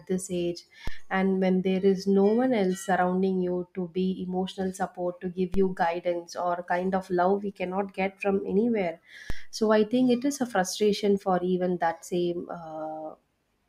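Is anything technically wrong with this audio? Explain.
Yes. DC steps at 0.88, 5.54 and 9.30 s: the waveform's zero line jumps abruptly, then drains away through a roughly 2 Hz high-pass, heard as low thumps beneath the unchanged speech.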